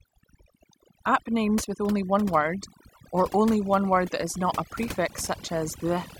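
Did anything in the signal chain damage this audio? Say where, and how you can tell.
Yes. Throughout the speech, the background between phrases falls to near silence dotted with twinkling specks. This is overdone noise removal applied to a noisy recording. A noise suppressor set far too aggressively pushes individual frequency bands down or off whenever their level sits close to its noise estimate. Faint speech detail shares those bands, so it gets cut too. Isolated surviving bins flicker through as the specks.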